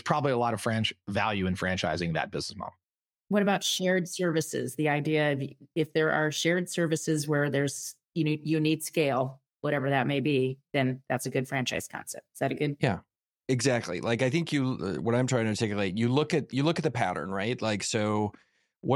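No audible technical faults.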